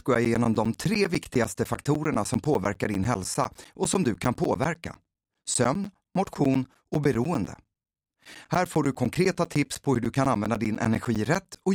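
From 0.15 to 11.66 s, periodic USB or driver dropouts blank roughly 10 ms every 0.1 s, ticking regularly; waveform shows evenly spaced flat gaps, spectrogram thin vertical stripes.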